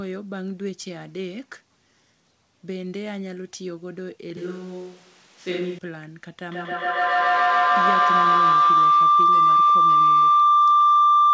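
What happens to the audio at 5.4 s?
From 4.37 to 5.78 s, a switch to a distant microphone likely occurs. The sound turns hollow, roomy and thin in the bass. The spectrogram shows smeared tails and weaker lows, while the waveform level barely changes.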